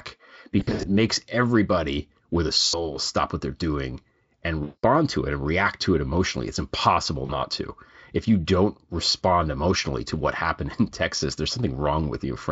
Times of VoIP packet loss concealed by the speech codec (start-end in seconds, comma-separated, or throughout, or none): 0.59-0.89, 2.67-2.95, 4.63-4.85, 7.25-7.36